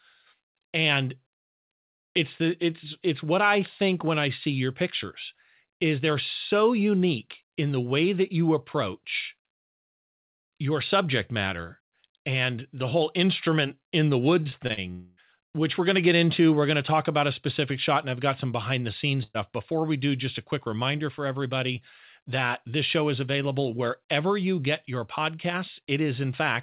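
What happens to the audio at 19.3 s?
The sound smears into a held, fading fill and then a brief hush from 19.23 to 19.36 s. A burst of packet loss dropped about 120 ms, which the receiver concealed.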